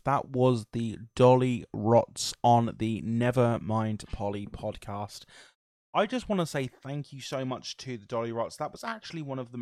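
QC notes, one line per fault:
No technical faults were found in the signal, and it needs no correction.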